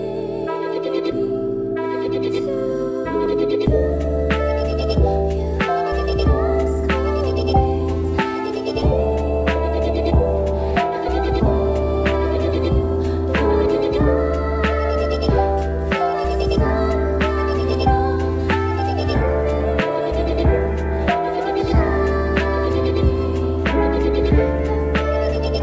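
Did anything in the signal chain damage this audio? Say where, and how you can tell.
No, nothing damaged this audio.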